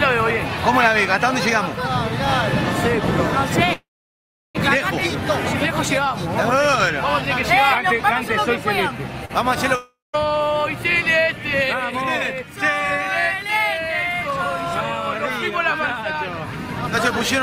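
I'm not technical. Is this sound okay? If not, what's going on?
No, there are three problems.

Call audio freeze, from 3.73 to 4.57 s: the connection likely held up the incoming audio, so the last sound was stretched into a brief fading buzz and then went quiet for about 0.7 s. Playback then resumed exactly where it stopped, adding a pause of about 0.8 s without losing anything.

Short stall from a late packet, from 9.25 to 9.31 s: one small piece of audio arrived late, so the last sound was held about 40 milliseconds too long, with a slight buzz or dip. It then carried on from the same place, with nothing missing.

Long network dropout, from 9.75 to 10.15 s: the audio likely stopped arriving for a moment. The last sound faded as a buzz, with near-silence for roughly the final 0.2 s, and the sound returned further along. About 0.38 s of audio was never played.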